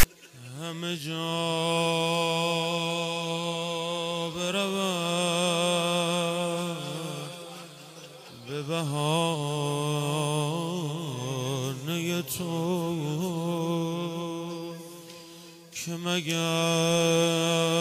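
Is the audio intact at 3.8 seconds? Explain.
Yes, the audio is intact at 3.8 seconds, with no dropout, click, distortion or other fault at that point.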